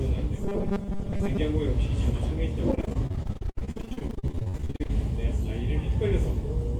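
From 0.36 to 1.38 s the audio takes on a rigid, metallic buzz at 200 Hz, the robotic sound from repeated short buffers. The likely cause is audio arriving too seldom, with the gaps filled by looping the most recent 5 ms, so about half of this stretch is repetition rather than new material. On a spectrogram this shows as evenly spaced horizontal harmonic lines at multiples of 200 Hz. The waveform shows a short cycle copied over and over.

From 2.71 to 4.91 s there is repeated packet loss, heard as choppy, robotic sound with pieces missing. Dozens of short holes, the longest 70 ms, were each patched by continuing the preceding sound, and nearly half of the span is concealment rather than real audio. A spectrogram shows the content breaking into short smeared or frozen blocks with abrupt edges. The waveform shows stuttering segments that repeat instead of evolving.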